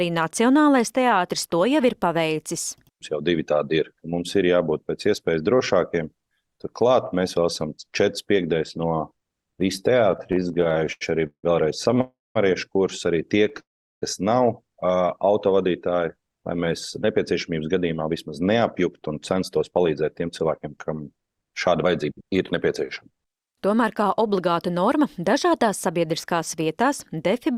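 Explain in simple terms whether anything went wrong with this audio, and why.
Yes, several things went wrong. From 10.11 to 11.99 s there are repeated stalls (stutter). The sound catches 21 times, with pauses up to 164 ms. Data arrived late, so the receiver kept stretching the last sound. Nothing is lost, but it drags. A shorter stutter, with four tiny catches, follows at 13.44 to 13.60 s.

There are also two call audio freezes, at 12.01 to 12.37 s and 13.60 to 14.04 s. The sound hangs, fades, and then goes quiet for about 0.2 and 0.4 s. The likely cause is data held up on the way. The audio then resumes where it stopped.

From 17.01 to 24.41 s there is a jitter buffer speed-up. The sound plays about 9% faster at the same pitch, so it feels hurried. The receiver had built up extra delay. It trimmed tiny slices, roughly 0.7 s in total, to catch up.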